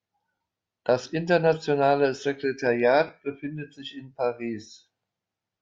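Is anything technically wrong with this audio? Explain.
Yes. The clip has lost LE Audio frames twice. From 0.35 to 0.40 s about 52.5 ms is missing, which fits seven 7.5 ms frames, and a shorter 15 ms gap sits at 3.07 s, just before "befindet sich in". The LC3 decoder fills each gap by repeating the last spectrum with random signs and fades the longer one, so the speech briefly turns into a noisy smear. On a spectrogram the harmonic lines blur into broadband hash, and the waveform shows a dip in the envelope. The light compression in the rest of the clip can hardly be heard.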